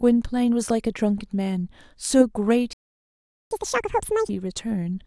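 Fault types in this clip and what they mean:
Playback stall: The speech stops mid-flow at 2.73 s and the output stays silent for about 0.78 s, until 3.51 s, before the sound resumes. This is most likely the player running short of buffered data or its audio thread being blocked, so nothing reached the output until it recovered. The gap is long enough to hear clearly as a dropout rather than a click.
Catch-up at higher speed: Right after the stall, from 3.51 s to 4.29 s, the player works through its backlog by resampling at 2.0 times normal speed. Speed and pitch rise together, so the speech sounds rushed and shifted up by roughly ten semitones, giving a chipmunk-like quality. Once the lost time has been recovered at 4.29 s, playback returns to normal speed and pitch.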